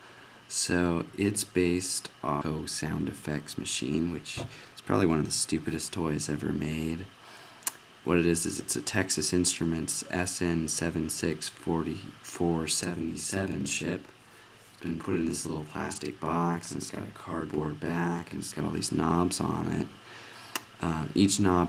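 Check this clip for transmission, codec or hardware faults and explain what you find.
Three faults turn up: a skip ahead, a jitter buffer speed-up, and a channel delay heard as doubling.

At 2.41 s a skip ahead drops about a second of audio. The two sides join with no fill, so the sound jumps abruptly. On a waveform the envelope changes at one vertical seam, and the spectrogram shows an abrupt discontinuity rather than a gap.

From 2.51 to 5.98 s a jitter buffer speed-up plays at 107% to shed the excess delay, trimming around a third of a second as many pitch-period-sized cuts. Pitch stays put but the audio sounds hurried. Spectrogram harmonics stay level while events compress in time.

From 12.83 to 18.60 s a channel delay (doubling) occurs because one channel runs 40 ms late and is summed to mono. The result is a slapback doubling at equal level. The waveform shows each transient repeated 40 ms later, and the spectrogram shows onsets smeared into doubled edges, with comb-like notching.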